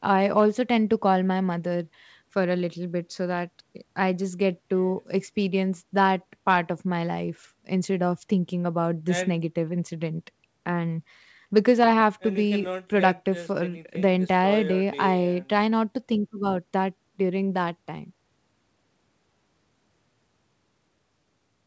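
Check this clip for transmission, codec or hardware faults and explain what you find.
Nothing stood out on listening to this speech; it carries the ordinary character of a call, with content stopping at about 8 kHz as the G.722 path and microphone processing would leave it.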